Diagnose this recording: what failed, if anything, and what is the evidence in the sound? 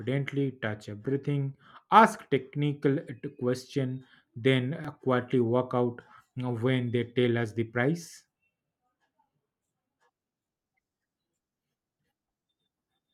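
A repeated buffer at the driver or buffer stage, at 4.85 s, between "question then" and "quietly walk out". The playback device ran short of fresh data and replayed the last block once. The block was only about 5 ms long, which fits a small device buffer, so the doubled piece is heard as a single click with a hard join rather than an audible stutter. Unlike a dropout, nothing goes missing. The extra copy adds time instead of leaving a gap of silence.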